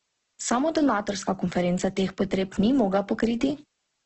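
A steady, even hiss runs under the speech from start to finish. This is low bit depth with dither. The audio was rounded to very few levels, consistent with about 10 bits, and dither turned the rounding error into flat noise about 50 dB down. No distortion is heard.

The speech is also grainy and rough throughout, with nothing above 8.2 kHz. This is likely heavy Opus compression in its music mode, at a very low bitrate around 12 kbps. Starved bands are filled with noise, so tones turn coarse rather than swirly.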